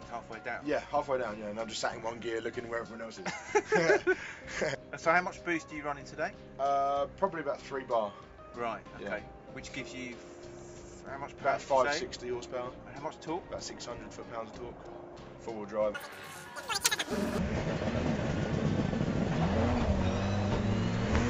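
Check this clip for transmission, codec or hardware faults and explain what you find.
One fault stands out, a wrong sample rate. From 15.95 to 17.38 s, the sound jumps sharply higher and faster. Samples are being played back faster than they were captured, with no conversion. Speed rises 2.76 times, and pitch climbs about 17.6 semitones. That ratio fits audio recorded at 16 kHz but played at 44.1 kHz.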